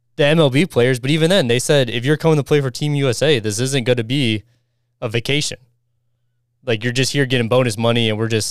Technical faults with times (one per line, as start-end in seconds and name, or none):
none